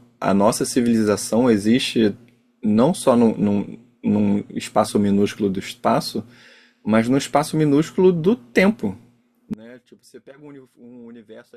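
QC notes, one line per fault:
9.54–11.57 s, audio dropout to a faint residue: the speech cuts out abruptly mid-flow and never returns before the end, leaving only a faint trace of the signal roughly 25 dB below its normal level. The likely cause is a broken feed whose downstream path stayed live and picked up leakage. On the waveform the envelope collapses in a single step to a thin band. The spectrogram shows a sharp vertical edge into pale, low-energy texture rather than a taper.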